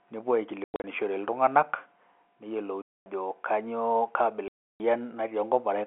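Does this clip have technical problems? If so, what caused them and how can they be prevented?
Yes. The speech has packet loss filled with silence: dropouts scattered across 0.64 to 0.84 s (about 160 ms missing, the longest run 100 ms), then solid holes from 2.82 to 3.06 s and from 4.48 to 4.8 s. The gaps come in steps that fit 20 ms packets, and their edges are abrupt. On a waveform they show as flat near-silent stretches, and on a spectrogram as blank vertical bands that cut through the narrow 250 Hz to 3.4 kHz telephone band. Using a jitter buffer with packet loss concealment, plus redundancy or forward error correction on the link, prevents this.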